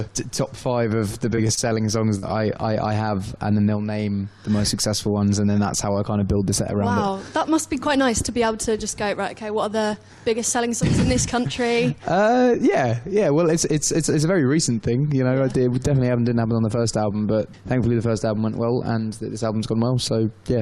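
Between 1.29 and 1.59 s the audio turns choppy and robotic from repeated packet loss: four gaps in quick succession were patched, about 75 ms in all, roughly a quarter of that stretch. Right after, from 1.69 to 1.87 s, a jitter buffer slow-down stretches the sound to 84% speed by adding 36 ms. Pitch stays the same, unlike a tape-style slowdown that drops in pitch. At 2.18 to 2.24 s a short concealed packet loss fills about 40 ms with a continuation of the last sound. It is heard as one brief smear rather than the chain of holes heard earlier.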